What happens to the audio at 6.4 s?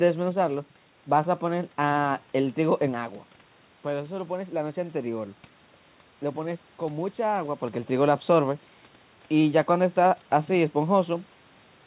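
Nothing goes wrong at 6.4 s, and the speech carries on intact through that moment with no dropout, glitch or distortion.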